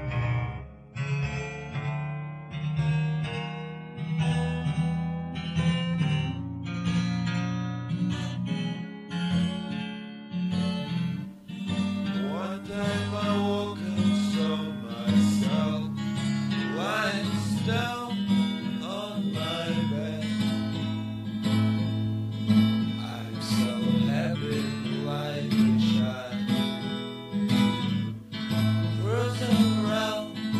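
Nothing is technically wrong with the clip.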